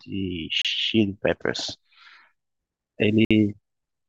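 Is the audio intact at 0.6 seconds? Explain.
No: a Bluetooth stall cuts the speech to silence from 0.62 to 0.65 s, likely a drained headphone buffer, showing as a flat waveform gap and blank spectrogram column.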